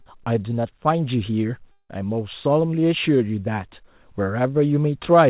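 Short concealed packet loss at 0.02 to 0.08 s opens this speech recording, which comes over a narrowband call line with nothing above 4 kHz, consistent with G.711 A-law at 64 kbps. About 40 ms of audio never reached the decoder in time, and the receiver covered the gap by carrying the preceding sound forward for roughly 36 ms before blending back into real audio, leaving a brief smear or wobble at the very start. A long network dropout is the likely cause of the gap from 1.72 to 1.91 s, where about 180 ms of audio is lost. The receiver extends the last sound as a fading buzz or hiss for roughly 170 ms, followed by about 60 ms of silence, and the speech then resumes further on without the missing portion.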